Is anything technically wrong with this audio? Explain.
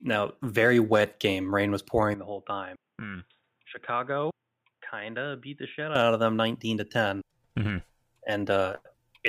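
Yes. From 2.14 s to 5.95 s the speech turns dull and boxy, starting just before "of them", then clears again. The likely cause is an input switched to a poorer device mid-recording. That device cuts everything above 3.8 kHz, so the crisp top of the speech disappears. The level also drops by about 10 dB. A faint new background noise sits well below the speech. Both changes happen without any silence at either switch.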